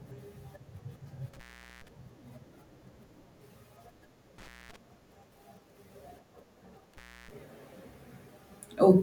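A loose cable or plug in this speech recording's signal path briefly opens three times, an intermittent contact fault. The sound cuts out with crackle at the edges and faint hiss for about 0.42 s at 1.33–1.88 s, 0.22 s at 4.38–4.76 s, and 0.31 s at 6.94–7.31 s.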